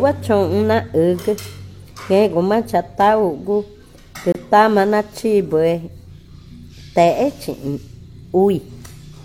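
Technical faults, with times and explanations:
4.32–4.35 s, gap between stream segments: mismatched segment timestamps leave 26 ms of silence, a hard-edged flat notch in the waveform and a blank vertical stripe on the spectrogram.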